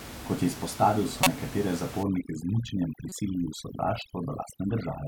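Corrupt frame decoded at 1.23 to 1.27 s, just after "je izpostavil": damaged compressed data from a couple of frames was played anyway, misplacing energy across frequencies as a fairly loud, brief chirp, squeak, blip or burst of noise. Overdone noise removal from 2.03 s to the end: over-strong noise reduction strips bands near the room-noise level, which sits about 12 dB below the speech, leaving near-silent gaps with twinkling specks. Corrupt frame decoded again at 3.09 to 3.12 s, this time a single frame, giving a much quieter chirp, squeak, blip or burst of noise.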